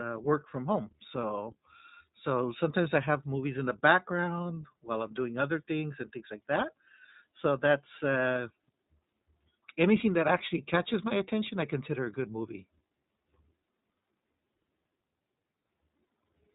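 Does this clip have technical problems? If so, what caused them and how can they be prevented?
Yes. Throughout the speech, the sound is muffled and telephone-like, with a rough, synthetic quality. This is the iLBC codec: a narrowband VoIP coder that cuts everything above about 3.8 kHz and encodes the excitation of each 20 ms frame independently, which fits a rate of around 15.2 kbps. Its damage is plainly audible here. To prevent it, use a wideband codec such as Opus at a higher bitrate.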